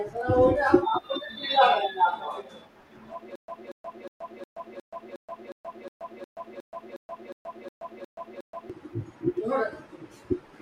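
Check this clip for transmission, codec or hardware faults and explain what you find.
One transmission fault is present: a stutter with silent gaps from 3.36 s to 8.70 s. A fragment of speech about 234 ms long replays 15 times, each followed by about 127 ms of digital silence, repeating every 361 ms. This is likely a stalled stream or player re-sending its last buffered chunk and then running dry, so the speech belonging to that stretch is lost. On a waveform it looks like identical blocks separated by flat silent stretches. A spectrogram shows matching patches alternating with blank vertical columns.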